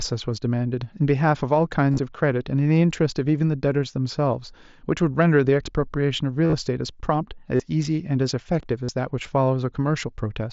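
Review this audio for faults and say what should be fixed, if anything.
Brief buzzy, held-tone patches, each ending in a slight warble as the speech comes back, appear at 1.92–1.99 s, 6.46–6.53 s, 7.56–7.60 s and 8.84–8.89 s. This is concealed Bluetooth headset packet loss. Packets between headset and phone dropped, about 40 to 70 ms in total per event with runs up to 30 ms in the first two, and the receiver filled each gap by repeating the best-matching recent stretch of waveform. Moving the headset closer to the phone and away from Wi-Fi interference should prevent the losses.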